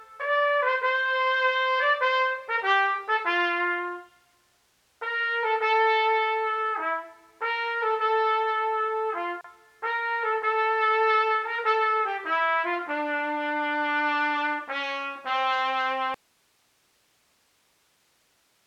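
At 9.41 s a gap at a join of encoded pieces cuts into the continuous sound for about 33 ms, ending at 9.44 s. The audio appears to have been encoded in separate sections and joined without trimming, so the encoder's start-up delay and final-frame padding remain as silence at the joint. The edges of the hole are smeared by the codec, and the sound resumes exactly where it stopped.

From 16.14 s to the end, the audio drops out to a faint residue. The wanted signal cuts off abruptly, with no fade, and does not return. Only hiss remains, roughly 40 dB below the previous level, which shows the downstream chain stayed live after the source was lost. The likely cause is a break in the input feeding an otherwise active path, leaving only its noise floor audible.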